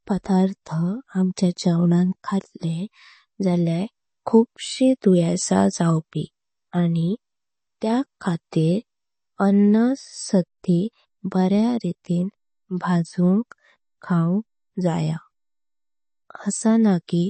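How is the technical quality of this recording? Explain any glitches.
The technical quality is limited by one fault that runs through the whole speech clip. It shows the marks of MP3 compression, most likely encoded at a low bitrate. The damage is plainly audible. Nothing is present above 8.3 kHz, so the top end sounds dull. That points to roughly 32 kbps. Short of bits, the encoder cut the treble at a fixed point and dropped weak frequency lines. Those lines flicker on and off between frames, which gives the sound a watery, swirling quality.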